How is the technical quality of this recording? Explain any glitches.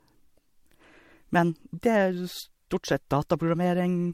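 The technical quality is compromised by generation loss across the whole of this speech clip. The speech sounds swirly, hollow and smeared, with blurred consonant attacks, more degraded than a single lossy encode would leave it. This is likely from the audio having been run through an MP3 codec about three times, at a rate that points to 64 kbit/s. Each re-encode quantises on a shifted frame grid, so noise and spectral holes accumulate. On a spectrogram, nothing appears above 16.6 kHz, with patchy, flickering holes below that; the waveform shows softened transients.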